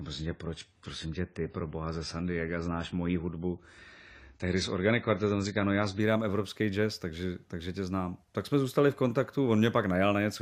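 From 0.0 to 6.0 s, an adaptive stream starting at a low bitrate leaves nothing above 10 kHz and stronger codec artefacts. Quality then steps up without a gap before "evropský jazz takže takže".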